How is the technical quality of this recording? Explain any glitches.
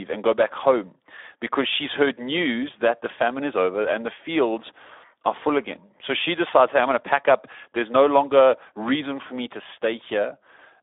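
The technical quality is poor: Speex codec damage runs through the whole recording. It is a narrowband CELP coder whose excitation is starved of bits, roughly what an 11 kbps setting gives. The speech turns hoarse and noisy, squeezed into a line band of about 300 Hz to 3.6 kHz.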